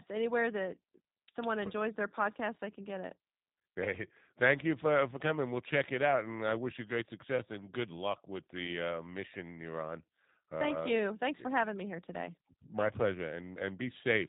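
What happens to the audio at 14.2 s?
The speech at 14.2 s, like the whole clip, has passed through a G.729 codec, which rebuilds it from a vocal tract filter, a pitch predictor and a few pulses per frame, a coarse model that fits an 8 kbit/s link. Nothing above 3.8 kHz survives, and the coding damage is plainly audible as a rough, synthetic edge.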